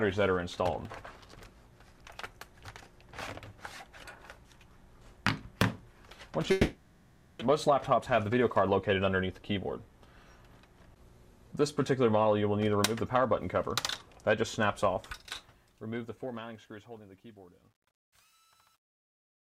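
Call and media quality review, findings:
6.51–7.43 s: sound smears into a fading buzz, then resumes with a stretch missing. Likely long network dropout: about 0.9 s concealed, about 0.6 s never played.

7.51–10.24 s: audio runs hurried at unchanged pitch, about 110% speed. Jitter buffer speed-up: pitch-period chunks trimmed to drain roughly 0.3 s of built-up delay.

14.83 s to end: the fade-out turns gritty, worst from 16.63 s. Truncation distortion on a fade: undithered 10-bit gain stage quantising the tail into steps.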